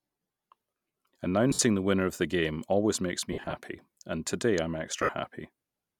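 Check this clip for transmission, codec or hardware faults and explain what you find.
The clip has three dropouts consistent with lost LE Audio frames. They occur at 1.51–1.59 s (about 70 ms gone in one run), 3.33–3.53 s (130 ms missing in bursts, the longest around 50 ms) and 4.97–5.09 s (80 ms in bursts, longest around 50 ms). In each gap the LC3 decoder conceals the loss by repeating the last received spectrum with randomised phase signs. The speech therefore turns into a brief noisy, smeared hiss rather than cutting to clean silence.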